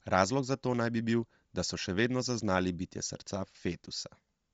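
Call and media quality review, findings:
Bluetooth LC3 compression, throughout. Speech sounds breathy and grainy, with plainly audible codec damage. Nothing above 7.7 kHz. Likely cause: LC3 transform coding at a low rate, consistent with about 32 kbps and 10 ms frames. The upper spectrum is largely zeroed and refilled with noise, giving the rough, hissy edge.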